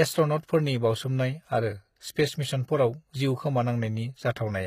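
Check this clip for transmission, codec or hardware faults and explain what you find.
One codec fault runs through the whole speech clip. Throughout, likely HE-AAC compression, which fits a low bitrate around 20 kbps: the treble is rebuilt from copied lower bands, so harmonics misalign, nothing sits above 14.9 kHz, and the damage is plainly audible.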